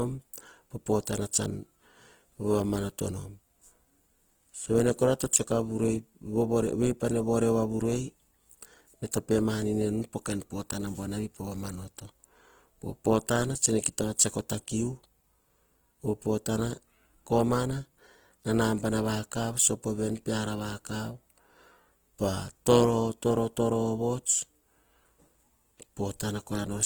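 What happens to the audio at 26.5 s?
Opus-style compression damage runs through the whole clip, including 26.5 s. The speech sounds grainy and rough, likely from band energies filled in with noise at a low bitrate around 16 kbps, though content reaches 20.2 kHz.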